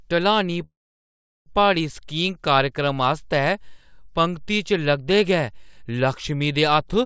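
From 0.64 s to 1.48 s the speech halts. A short fading fill drops into about 0.75 s of silence. This is a call audio freeze, likely from delayed packets emptying the jitter buffer. The speech then resumes where it stopped, with nothing lost.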